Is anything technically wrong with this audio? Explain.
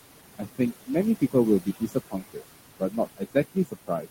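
Yes. Throughout the speech, the background noise sinks between phrases and swells back under them. These are noise suppressor artifacts: the suppressor pulls down, frame by frame, every band it judges to be steady noise, here by about 20 dB, so the room noise, which sits about 12 dB below the speech, pumps with the voice.

In five stretches the speech itself goes faint and swallowed: 0.38–0.9 s, 1.61–2.42 s, 2.79–2.99 s, 3.17–3.36 s and 3.52–4.08 s. This is speech cut by the noise suppressor. It mistook brief, soft parts of the speech for noise and lowered them along with the background, by about 18 to 22 dB at the deepest points.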